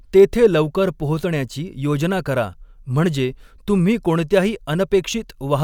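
No technical faults can be heard in the speech recording. There is nothing that needs a time marker or a comment on how the signal was carried.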